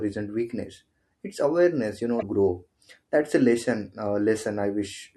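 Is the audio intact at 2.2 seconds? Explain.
No. Just after "awareness you", from 2.18 to 2.23 s, the audio is broken by damaged data in the compressed stream. Bytes in the encoded file there are corrupt, so the decoder misreads the affected frames, loses sync and searches ahead for the next valid frame header. What comes out is a short glitch of about 40 ms.

Underneath that glitch, and across the whole clip, is a watery, swirly quality, which is likely MP3 compression at a low bitrate around 64 kbps. Short of bits, the encoder drops weak frequency lines that flicker in and out between frames, so the s sounds chirp and attacks smear. This is a steady texture throughout rather than a single burst, which is what separates it from the stream damage at 2.2 s.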